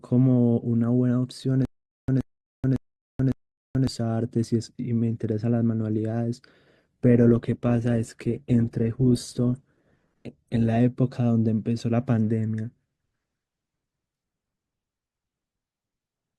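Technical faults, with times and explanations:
1.65–3.87 s, stutter with silent gaps: a 124 ms burst of speech repeats four times, each followed by 432 ms of digital silence, a steady 556 ms cycle. This likely comes from a stalled player replaying its last fragment, and the speech that should fill this stretch is lost rather than merely repeated.
6.79–10.79 s, adaptive stream at a lower bitrate: for four seconds codec artefacts grow stronger, which fits an Opus stream stepping down from about 64 to 16 kbit/s. The quality switches abruptly at both ends with no gap, unlike a dropout.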